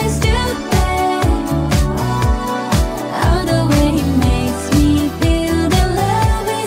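No technical faults can be heard in the audio.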